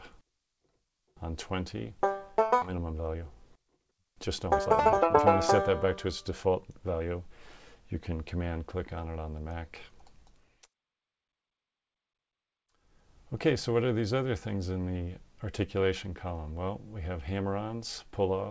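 At 2.62 s the audio jumps forward in a skip ahead. About a second and a half of sound is gone. Nothing fills the gap, so the two sides are joined almost directly. The jump points to a stretch of audio being dropped while later audio waited.

From 2.71 s to 7.01 s a jitter buffer speed-up follows. The buffer held too much audio, so the receiver trimmed short pitch-period pieces again and again. Playback runs at 121% speed with pitch unchanged, removing about a second. It sounds hurried. Above 8 kHz there is nothing, which fits the G.722 call codec.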